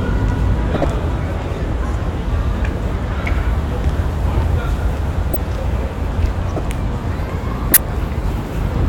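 At 0.74 to 0.84 s, 5.34 to 5.37 s, 6.55 to 6.61 s and 7.69 to 7.77 s, a corrupt frame was decoded: flipped bits in a short run of compressed frames were played without being rejected. The misread gains and codes put energy at the wrong frequencies, so each event sounds like a brief chirp or noisy blip lasting a few frames. The bursts are loud, with error peaks around -5 dBFS (about -10 dBFS for the third).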